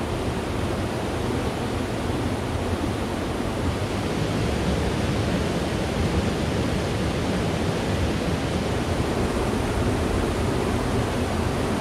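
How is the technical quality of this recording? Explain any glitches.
No glitches turn up here; the recording runs without any audible technical fault, with no dropouts, clicks or interruptions in the signal.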